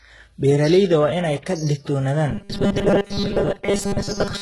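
From the start the treble sounds gritty and lispy, likely heavy HE-AAC compression whose rebuilt treble points to a very low bitrate near 12 kbps. From 2.31 s to the end at 4.41 s, the speech becomes a rigid metallic buzz at 200 Hz, a robotic sound likely from repeated short buffers standing in for most of the missing audio.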